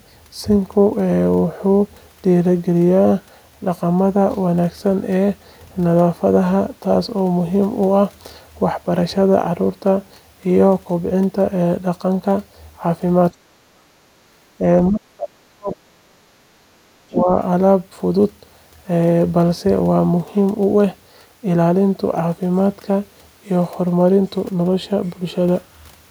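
From 13.31 to 13.89 s the talker's speech is pushed down hard, by roughly 40 dB, for about half a second. This is speech suppressed in double talk, likely because the echo canceller heard far-end audio at the same moment and clamped the microphone path. On a spectrogram the speech harmonics fade almost to nothing across the band. The waveform envelope collapses into a deep notch.

From 14.17 to 14.3 s the room background drops by about 13 dB for roughly 150 ms, then returns. This is background gated by the echo canceller: while the loudspeaker was active, the canceller shut the microphone down and took the ambient floor with it. A spectrogram shows the broadband noise floor thinning into a short, darker vertical band. The waveform's low-level floor narrows visibly, then recovers.

A small suppression dip follows at 14.58 to 14.63 s, only about 5 dB and about 50 ms, likely from the same double-talk clamping. 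It shows as a faint nick in the envelope. A longer episode runs from 14.89 to 16.22 s. Within it, about a second of speech is pushed down by roughly 40 dB, likely double talk again. The spectrogram shows speech energy fading over those parts.

Inside that stretch, at 15.72 to 15.76 s, a brief scrap of the other side's voice leaking through can be heard. It sits roughly 20 dB below the talker and is likely residual loudspeaker echo the canceller failed to remove. On a spectrogram it appears as a faint, isolated patch of harmonic energy. In the waveform it is barely distinguishable.

From 16.56 to 17.28 s the talker is suppressed once more, roughly 40 dB deep over about 0.7 s, likely double talk. The spectrogram shows the same fading harmonics. The envelope shows the same deep trough.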